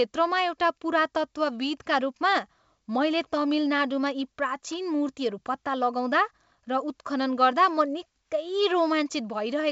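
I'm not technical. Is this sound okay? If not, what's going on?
Yes, no faults heard.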